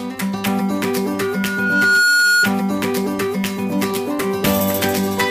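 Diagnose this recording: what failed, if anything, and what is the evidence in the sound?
A single steady tone at 1.4 kHz swells out of the sound from 1.19 s, growing for about a second until it sits roughly 5 dB above the programme, then stops at 2.52 s. That is loudspeaker feedback squeal, a fault in the acoustic loop between the playback loudspeaker and the microphone feeding it. At 1.4 kHz the loop gain exceeded one, so that frequency kept reinforcing itself on each pass.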